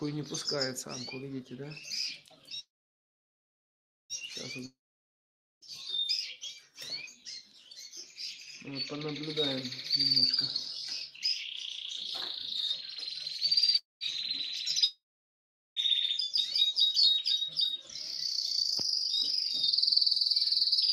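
Two call audio freezes interrupt the audio, at 2.59–4.13 s and 13.77–14.04 s. Each time, the last sound smears into a fading buzz, then near-silence (about 1.4 s and 0.18 s), before resuming exactly where it stopped. That points to delayed packets, likely draining the jitter buffer. On a spectrogram this appears as a blurred decaying column and then a blank band, and on the waveform as a flattened stretch. Long network dropouts at 4.66–5.64 s and 14.84–15.79 s look similar: a short fading smear, then flat silence (about 0.88 s and 0.78 s). The audio, however, returns further ahead, with roughly 0.96 s and 0.92 s gone, likely from packets lost in transit.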